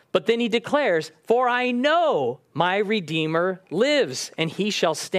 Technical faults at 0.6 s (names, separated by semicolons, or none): none